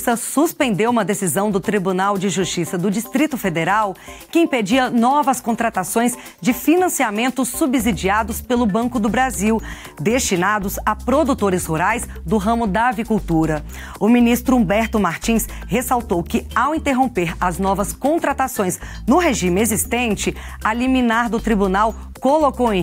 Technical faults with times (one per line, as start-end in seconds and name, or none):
none